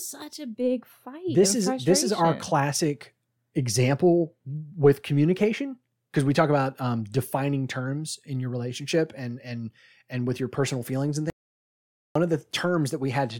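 At 11.3 s the speech cuts to total silence until 12.16 s, an audio dropout to silence of about 0.85 s. It was likely caused by the input briefly losing signal while recording continued. The waveform goes flat, and the spectrogram shows a blank gap with no room tone.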